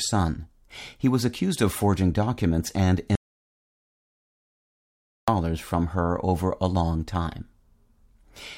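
At 3.15 s the speech cuts out mid-flow and the track falls to silence until 5.28 s, about 2.1 s of lost audio. This is an audio dropout to silence, most likely from the input being interrupted while the recorder kept writing silence. Unlike a natural pause or a noise gate closing, the room tone vanishes entirely and the speech resumes abruptly, with whatever was said in between simply missing.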